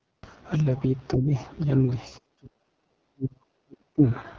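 Speech runs throughout with AMR wideband (HD Voice) codec damage: the voice sounds heavily rough and raspy, which fits the codec's lowest 6.6 kbit/s mode. On a spectrogram, harmonics look smeared and buzzy below 6.4 kHz, with a shaped noise band from 6.4 to 7 kHz, and the call microphone processing leaves nothing above 8 kHz. The level then dips briefly by about 15 dB from 1.15 to 1.31 s, and from 2.19 to 4.02 s it drops by up to roughly 40 dB, for about 1.5 s in total. This is likely speech suppressed in double talk, where the echo canceller turned the talker down while the far side spoke. The waveform shows a shallow notch at the first spot, then a deep drop through the later stretch.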